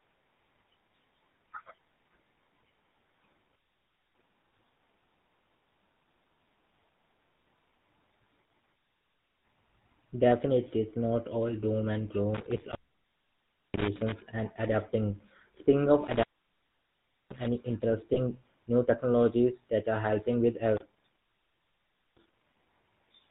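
From start to finish the speech has the buzzy, gravelly roughness of the GSM full-rate codec: nothing above 4 kHz, pulse-driven excitation, consistent with a 13 kbps stream. An intermittent contact cuts the line from 12.35 to 14.12 s, 16.07 to 17.47 s and 20.77 to 22.57 s, each open for about a second. Crackle at the break edges and faint hiss in the gaps mark a physical connection fault rather than a digital dropout. Between 18.14 and 18.19 s, lost GSM frames leave a brief metallic ring where the last good frame was repeated, which fits a single missing frame. It is too short to fade to silence and, unlike the contact faults, has no crackle.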